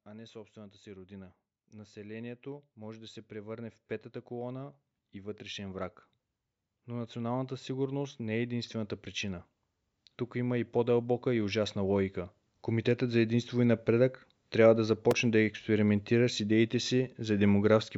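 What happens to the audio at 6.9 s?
At 6.9 s the automatic gain is rising: from 6.71 to 9.51 s the gain control, judging the input too quiet, lifts the level by about 5 dB. Unlike a talker simply getting louder, the background swells along with the speech, gradually rather than in a step.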